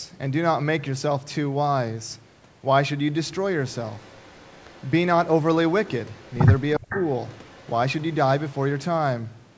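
From 3.97 to 4.91 s, and again at 6.16 to 6.34 s, there's a quiet delayed copy of the speech trailing it by about 0.36 s and sitting far below it. That's an echo leak, likely from a loudspeaker side whose echo canceller let some of the played voice back through.

At 6.79 to 6.96 s the speech itself dips by up to about 20 dB, roughly 150 ms in all. That's speech suppressed in double talk: likely the canceller couldn't tell its own talker from the echo and turned both down. Overlapping that, from 6.89 to 7.05 s, the echo comes back much louder, only about 15 dB under the speech. A last faint echo stretch runs from 7.35 to 7.7 s, with the same 0.36 s lag.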